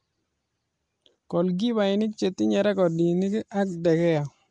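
From start to finish, the speech carries a rough, hissy halo. It also sounds smeared and underwater. Nothing is present above 10.6 kHz. The likely cause is Nellymoser compression, Flash's microphone codec. The damage fits a rate near 44 kbps. Starved bands come back as noise.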